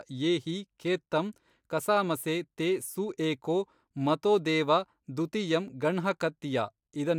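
No technical fault can be heard anywhere in the speech recording. There is nothing to place on the timeline.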